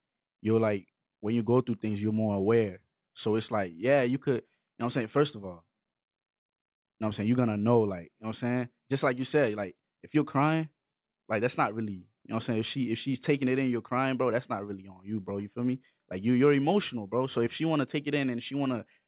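Nothing stood out on listening to this speech, which comes through a call path whose codec leaves nothing above 4 kHz.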